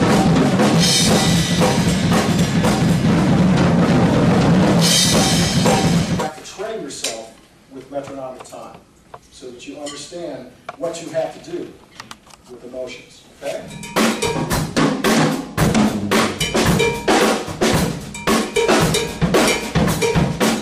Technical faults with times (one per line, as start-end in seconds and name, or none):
none